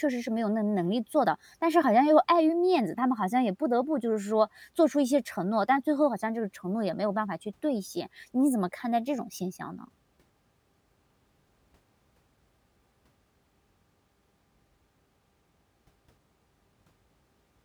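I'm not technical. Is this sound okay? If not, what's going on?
Yes, nothing in this recording points to a technical problem with the signal at any point.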